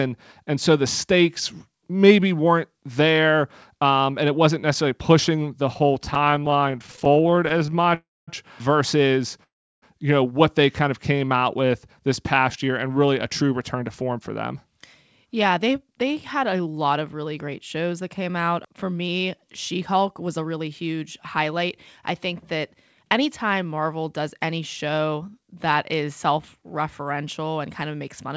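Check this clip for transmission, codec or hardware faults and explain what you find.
Several timing faults from the network path can be heard in this speech, all in the middle stretch of the clip. The band stops at 8 kHz, consistent with G.722 at 64 kbps.

Repeated stalls (stutter) run from 5.74 to 7.92 s, starting after "wasn't necessarily pushing the" and continuing up to "versus you know what". The speech catches and drags in 48 tiny hiccups, none longer than 15 ms, which adds up to about 0.48 s of stretched sound, or 22% of the span. Packets were arriving too slowly, so the jitter buffer kept draining. Each time, the receiver extended the last sound until data arrived. Nothing is lost.

Call audio freezes occur at 7.94 to 8.29 s, just before "versus you know what", and at 9.43 to 9.84 s. In each, the sound briefly smears on and then falls away to silence. The first lasts 0.33 s, with 0.23 s of silence. 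The second lasts 0.39 s, with 0.34 s of silence. Packets were likely held up in transit, emptying the jitter buffer. When they resumed, the speech continued from the same point, so a pause was inserted and nothing was dropped.

A jitter buffer slow-down from 11.13 to 11.72 s makes the speech sound drawn out at unchanged pitch, running at 89% speed. To rebuild its reserve, the receiver repeated single pitch periods or small slices of pauses, adding 75 ms in total.

Jitter buffer speed-ups run from 13.43 to 17.49 s and from 19.94 to 25.29 s, the second ending before "that is self referential". In both, the speech sounds hurried but keeps its pitch, running at 107%. The buffer had accumulated more audio than its target. It trimmed short pitch-period pieces to cut the excess delay, removing roughly 0.3 s and 0.4 s respectively.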